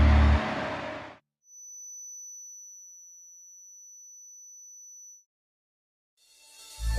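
There's a thin, steady feedback whistle at 6 kHz from 1.40 to 5.27 s, sitting roughly 25 dB under the main sound and wavering a touch in level. It's likely a speaker-to-mic loop hovering right at the edge of feedback without running away.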